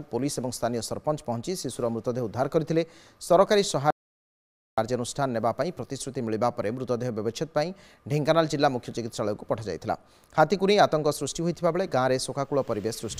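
An audio dropout to silence runs from 3.91 s to 4.78 s. The sound stops mid-flow and the next 0.87 s is dead silent, with no room tone or background underneath. It then resumes just as abruptly. The likely cause is that the input was lost for that stretch, through a disconnected device, a failed link or a stray mute, while recording carried on writing silence. Whatever was sounding during the gap is gone.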